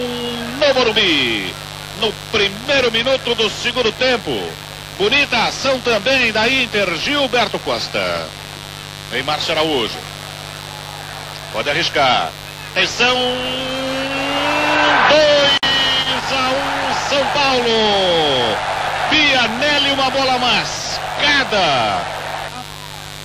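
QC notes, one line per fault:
Throughout: mains buzz. A steady, raspy buzz sits under the sound at about 15 dB below it, built on 50 Hz. Sharp switching spikes from a dimmer, rectifier or poorly shielded line repeat twice per mains cycle, so harmonics stack well up into the kilohertz range.
15.58 to 15.63 s: gap at a join of encoded pieces. A 53 ms gap cuts into continuous sound, and then the sound resumes exactly where it broke off. Separately encoded pieces were joined untrimmed, leaving the encoder's start-up delay and final-frame padding in place, with smeared edges.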